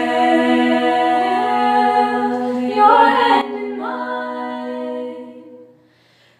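At 3.41 s the audio drops by about 12 dB in a single sample and stays there to the end, a sudden gain jump. The background noise falls with it, likely from a gain setting applied without a ramp. The waveform envelope steps down abruptly, and the spectrogram darkens across all frequencies at once.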